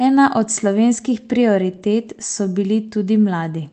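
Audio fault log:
Throughout: clock drift between sender and receiver. The sender's clock runs about 3% slow, so the jitter buffer keeps draining and the timing wobbles unevenly.
0.20–3.53 s: repeated timing corrections. The receiver keeps padding with short repeated slices, running things at 97% speed and adding about a tenth of a second.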